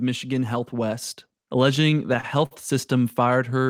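A short speech recording carries two faults. At 1.02 s the microphone volume is stepped up: the call software judged the input too quiet and raised the device gain in a single jump of about 5 dB. Voice and background noise both get louder at once. On a waveform the envelope steps up abruptly at that instant. On a spectrogram everything above that point, including the noise floor, turns uniformly brighter. From 1.75 to 2.53 s there are repeated stalls (stutter). Packets arrived late or too slowly, so the jitter buffer kept running dry. Nine times the receiver extended the last sound until playback could resume, with the longest hold at 51 ms. About 135 ms is filled this way, roughly 17% of that stretch, but nothing is lost, so the speech drags and stammers rather than skipping. A spectrogram shows short, smeared, repeated or held patches where the normal time detail flattens out.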